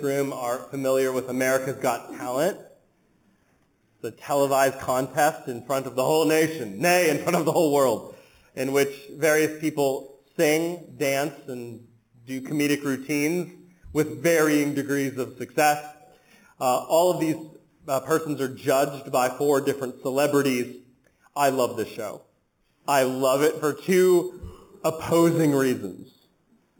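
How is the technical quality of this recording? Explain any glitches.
The recording carries one fault for its full length: imaging from sample-and-hold upsampling. The sound was brought up to a higher rate by repeating each sample without an interpolation filter, and the spectrum points to an original rate of about 8 kHz raised to 48 kHz. Mirrored copies of the content fold around 8 kHz and its multiples, the first filling the 4 to 8 kHz band at about 16 dB below the signal. This shows up as a bright, metallic fizz that rises and falls with the sound, its lowest component moving opposite to the pitch.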